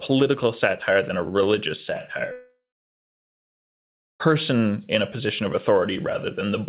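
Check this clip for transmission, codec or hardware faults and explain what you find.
There is one fault: a long network dropout from 2.32 to 4.22 s. The audio comes through a narrowband call path with nothing above 4 kHz, which fits G.711 A-law.

At 2.32 s the last sound is drawn out into a fading buzz or hiss. After a few tenths of a second it dies away, and 1.63 s of silence follows. Speech resumes at 4.22 s, but about 1.88 s of it is gone. The likely cause is that packets stopped arriving. The receiver extended the last sound it had to cover the gap, then went quiet until new audio came.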